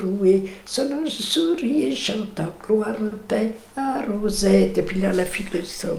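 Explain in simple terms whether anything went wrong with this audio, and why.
Something did go wrong, once, from 3.07 to 3.13 seconds. This is short concealed packet loss. About 40 milliseconds of audio never arrived in time to be played. The receiver covered the gap by stretching out the sound it had just played, then blended back into the real audio. You hear it as a quick smear or wobble. Anything very short in that moment can simply disappear.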